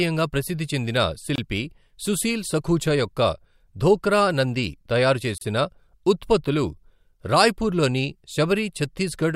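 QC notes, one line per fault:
1.36–1.38 s and 5.38–5.41 s: gap at a join of encoded pieces. Short silences of 24.5 ms and 32 ms, four seconds apart, cut into the continuous speech with smeared edges. Separately encoded segments were joined untrimmed, so each piece's start-up delay and final-frame padding remain.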